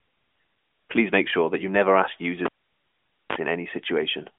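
At 2.45 s, just after "that you never ask", the cable carrying this speech was pulled out while live and plugged back in. The break opens with a pop and drops to near silence for about 0.85 s, then, as the plug is reinserted, a 34 ms burst of 50 Hz mains buzz sounds while only the tip makes contact. A second pop at 3.36 s marks the sound returning, still within the narrow telephone band of the AMR narrowband mobile codec, with nothing above 3.7 kHz.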